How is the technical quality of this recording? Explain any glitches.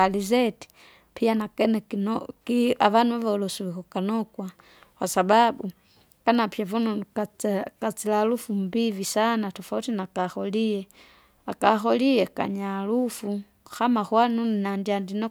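No glitches are audible anywhere in the recording.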